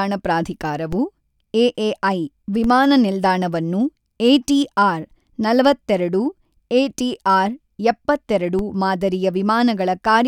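At 0.93 s and again at 2.64 s, a DC step shifts the waveform's zero line abruptly. Each offset then decays away, as a 20 Hz high-pass pulls it back. Each step is heard as a low thump, and the speech carries on unchanged.

At 7.13 s comes an underrun with held sample. The output buffer ran empty for 0.36 ms. The converter held its last value, so the waveform goes flat for that instant. Essentially no audio was lost. Playback picks up where it stopped.

A third DC step arrives at 8.59 s, with the same low thump and the same decay.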